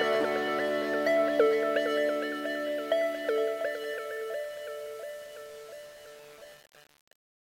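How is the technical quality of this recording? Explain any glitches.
The technical quality is poor throughout, because low bit depth without dither affects the whole recording.

From start to finish, an error floor sits about 25 dB below the signal, which fits likely 7-bit rounding with no dither. The error tracks the signal, giving grainy distortion on quiet passages or near-steady hiss in dense ones. On a waveform, quiet stretches look stair-stepped, and a spectrogram shows a raised broadband floor.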